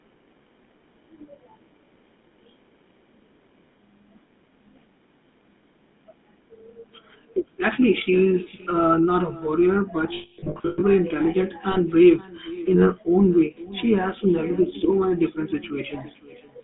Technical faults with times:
0.00-16.63 echo with no canceller
0.00-16.63 GSM full-rate codec
10.14-10.83 lost GSM frames
11.72-11.77 lost GSM frames

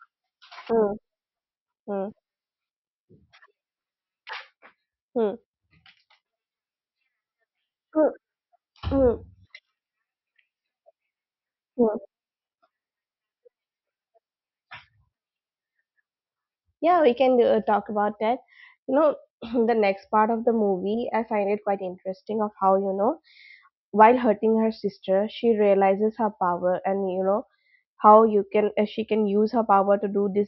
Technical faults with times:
none

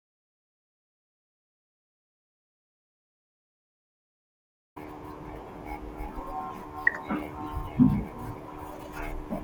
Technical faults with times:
0.00-4.76 audio dropout to silence

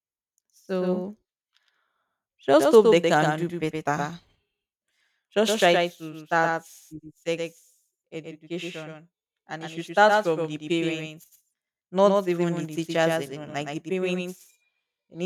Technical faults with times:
0.00-15.25 doubled audio track

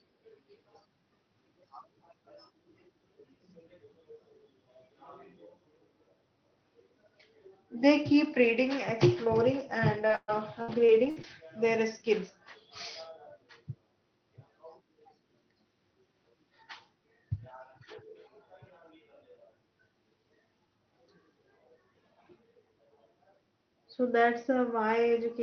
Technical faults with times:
10.07-11.25 repeated packet loss (robotic sound)

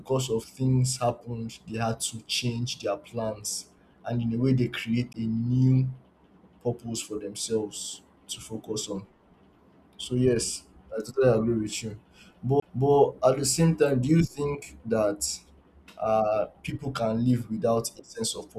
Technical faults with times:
5.13 CD skip
12.60-12.62 CD skip

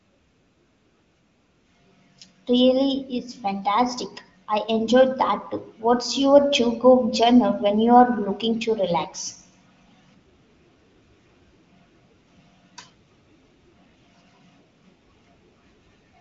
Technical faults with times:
none

